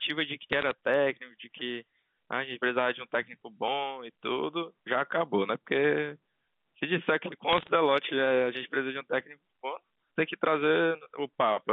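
From 0.53 to 0.71 s and again from 7.5 to 7.7 s, bit errors on a digital phone line put bursts of sharp ticks and crackle over the speech, which itself stays intact. Each flipped bit corrupts a single logarithmically coded sample. Hits on the sign or upper bits give the loudest ticks. The density suggests an error rate of roughly 0.4 percent in the first burst and 0.5 percent in the second, all within the narrow G.711 telephone band.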